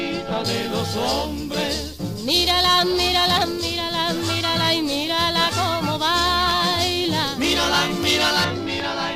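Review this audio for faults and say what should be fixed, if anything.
Pre-emphasis left on from 0.45 to 8.45 s: the treble lift of an FM 75 µs curve was never reversed by its matching de-emphasis, leaving highs about 13 dB too strong at 10 kHz relative to 1 kHz. The sound comes across thin, bright and sibilant, and a spectrogram shows the upper bands stronger than they should be across that whole stretch. Prevent it by applying the matching 75 µs de-emphasis wherever pre-emphasised material is received or captured.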